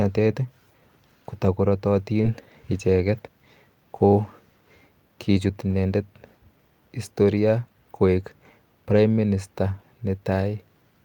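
A speech recording with brief, localized damage. From 2.21 to 2.25 s there is a short smear, where the sound is stretched from what came before and then blended back in, and a quick consonant may drop out. This is short concealed packet loss: about 20 ms never arrived in time, and the receiver filled the gap by extrapolating. At 2.23 to 2.25 s, 4.23 to 4.25 s and 8.91 to 8.97 s the audio turns momentarily rougher and noisier with no gap. These are lost packets rebuilt from error correction. The decoder played low-bitrate copies carried in the following packets, consistent with one lost packet at each of the first two times and two at the last.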